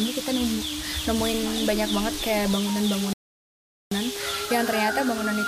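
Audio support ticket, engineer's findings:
Playback stall, 3.13 to 3.91 s. Likely cause: player buffer underrun or blocked audio thread, leaving the output device with nothing to render. Symptom: sound cuts out mid-flow into about 0.78 s of silence, then continues. Stall long enough to read as a dropout, not a click.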